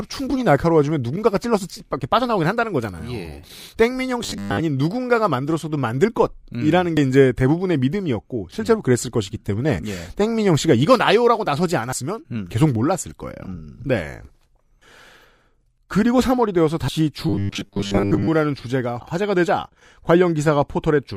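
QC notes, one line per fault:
2.01, 6.97, 11.93 and 16.88 s: audio missing between chunks. Four skips spaced about 5 s apart, each dropping roughly 40 ms with the two sides butted together. The regular spacing likely means audio is lost each time one 5-second chunk closes and the next opens.
4.23 to 4.60 s and 17.29 to 18.28 s: robotic sound from repeated short buffers. The sound turns into a stiff metallic buzz at 100 Hz that only roughly tracks the speech, with most of the real audio skipped. It's likely a 10 ms buffer being replayed while fresh audio arrives too slowly.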